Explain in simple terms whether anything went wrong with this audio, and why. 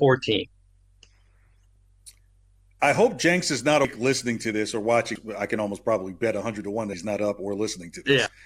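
Yes, there are four compressed frames skipped in this speech: at 3.84, 5.15, 6.93 and 8.26 s, chunks of roughly a tenth to a fifth of a second vanish.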